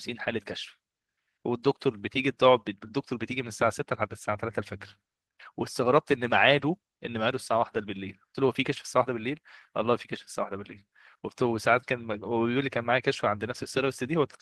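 At 6.57 s the speech turns briefly rough and grainy for about 40 ms, ending at 6.63 s, with no gap or dropout in the flow. This is a lost packet rebuilt from error correction: the missing audio, which fits two 20 ms Opus packets, was filled in from the lower-bitrate backup copies carried inside the packets that followed. Those coarser copies hold less detail, so the patched stretch sounds noisier than the 24 kbps Opus stream around it, whose content reaches up to about 12 kHz.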